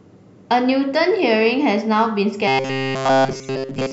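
A short speech recording turns into robotic sound from repeated short buffers at 2.48 s and stays that way to the end. The sound becomes a rigid, metallic buzz fixed at 133 Hz, and the whole stretch is made of repeats. This is likely caused by new audio arriving too seldom, so the same slice of roughly 7.5 ms is replayed over and over. Unlike ordinary pitch-shifting or a tonal hum, the buzz keeps that fixed period while the sound's broad shape still roughly tracks the original. Inside that passage, from 3.43 to 3.45 s, a corrupt frame is decoded. About one damaged frame puts energy at the wrong frequencies, and a brief error peaks at about -30 dBFS. It is distinct from the buzz because it is a single short burst with its own spectral colour, not a periodic repetition.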